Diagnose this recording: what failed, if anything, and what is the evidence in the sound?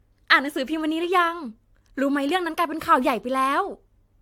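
Codec stage, generation loss: throughout the speech the sound is swirly, hollow and smeared, with blurred attacks and nothing above 19.2 kHz. The cause is likely about four AAC-LC passes; each requantises on a shifted frame grid, so noise and spectral holes pile up.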